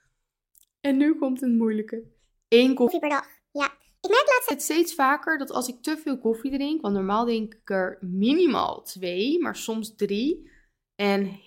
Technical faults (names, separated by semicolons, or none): section at the wrong speed